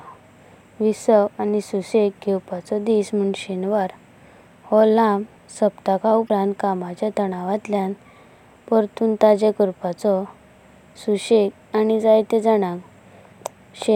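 At 6.25 to 6.30 s, damaged data in the compressed stream makes a brief glitch before "कामाच्या तनावातल्यां". Unlike a plain dropout, the decoder loses sync and searches for the next frame header.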